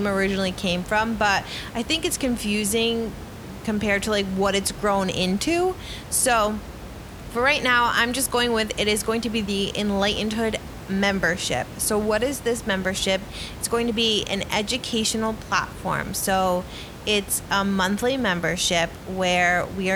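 No system faults in this speech recording; the only background is the room's own noise, sitting about 14 dB below the speech.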